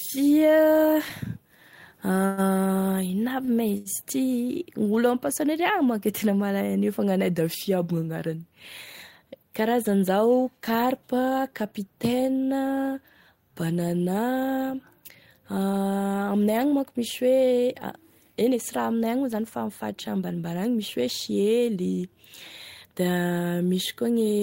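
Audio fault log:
1.09–3.88 s, repeated stalls (stutter): the sound halts four times as playback outruns the incoming audio, and each pause is covered by continuing the last sound, about 223 ms in all, roughly 8% of the span, the longest hold 118 ms, with that one fading down. Nothing is lost, but the flow drags and catches. On a spectrogram, short stretches of smeared, repeated harmonics interrupt the normal pattern, and the waveform shows brief plateaus or tapering envelopes.
9.88–11.89 s and 21.71–22.05 s, jitter buffer speed-up: with too much audio queued, playback trims short pitch-period pieces again and again to shrink the delay. The first stretch runs at 104% speed, dropping around 70 ms. The second, at 115% and dropping around 50 ms within a third of a second, sounds clearly hurried. The pitch stays level. A spectrogram shows unshifted harmonics with compressed timing, and the waveform shows periods spliced out.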